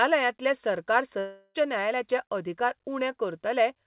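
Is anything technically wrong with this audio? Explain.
Yes, there's a long network dropout in this speech from about 1.19 s to 1.58 s. For roughly a third of a second (about 355 ms) you hear a smeared, fading buzz carrying on the last bit of sound, then about 30 ms of near-silence before the speech picks up again, with around 360 ms of material simply gone. That's likely a run of lost packets the receiver papered over by stretching what it last had. The band-limited sound, with nothing above 4 kHz, fits the G.711 mu-law call path at 64 kbps.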